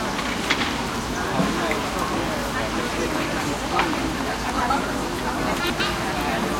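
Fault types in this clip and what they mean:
Chunks out of order: a 100 ms chunk plays one slot late, swapping with its neighbour, so the sound briefly jumbles at 4.5 and 5.6 s.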